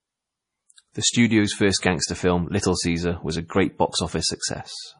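Speech throughout sounds watery and swirly, with nothing above 10.5 kHz: heavy MP3 compression, likely at a low bitrate around 32 kbps.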